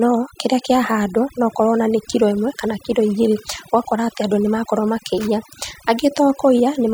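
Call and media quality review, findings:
Overdone noise removal, whole clip: background drops and breaks up into twinkling specks between phrases. Noise suppressor set too aggressive, cutting individual frequency bands near its noise estimate and taking quieter voice components down with them.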